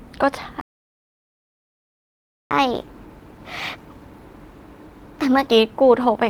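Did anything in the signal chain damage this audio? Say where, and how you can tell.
Yes. At 0.61 s the speech cuts off mid-flow and stays silent for 1.9 s, resuming at 2.51 s. This is a playback stall at the playback stage: the player's buffer likely ran dry or its thread was blocked.

From 2.51 s to 5.51 s the speech runs hurried and sounds higher, at 1.15 times normal speed and roughly two semitones up. This is catch-up at higher speed: the player resamples its backlog to regain lost time, then drops back to normal.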